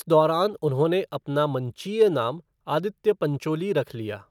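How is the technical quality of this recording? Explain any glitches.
No glitches: the speech recording shows no audible technical faults.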